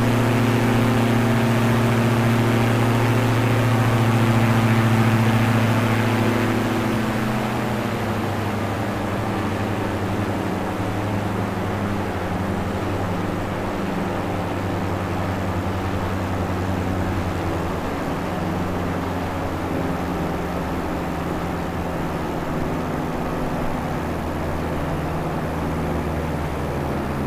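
No technical fault can be heard anywhere in this audio. Nothing in it calls for a timestamp or a cause.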